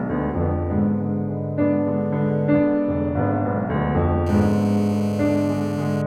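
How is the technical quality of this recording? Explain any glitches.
The music is marred near the end by GSM phone buzz. From 4.27 s to 6.02 s a hard, raspy buzz sits on top of the music at about 20 dB below it, nearly steady, pitched at roughly 217 Hz and rich in harmonics that have nothing to do with the music. A nearby 2G phone on a call was transmitting in bursts about 217 times a second. The audio circuitry rectified those radio pulses, turning the burst rhythm into an audible tone. Its steadiness fits an active call.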